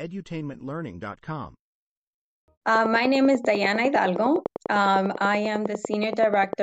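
From 2.75 to 6.54 s, a regular train of clicks ticks at 10.1 per second. Peaks reach about 10 dB over the speech, likely interference.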